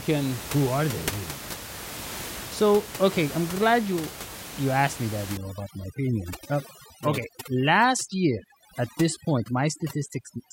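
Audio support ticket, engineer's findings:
Overdone noise removal, 5.37–10.53 s, after "you asked me that": background dropped, breaking into twinkling specks. Noise suppressor set too strong, cutting bands near its noise estimate, including quiet speech. Room noise about 12 dB below speech.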